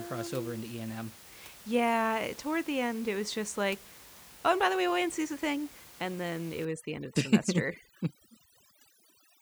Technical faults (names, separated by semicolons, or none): overdone noise removal